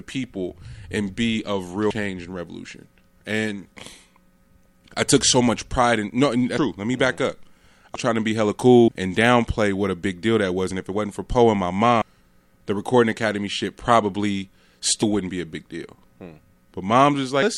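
Compressed frames are skipped at 1.90, 7.95, 8.88, 12.02 and 15.02 s. Whole blocks of coded audio never play. The sound jumps ahead by roughly 150 to 500 ms, which fits 32 ms frames.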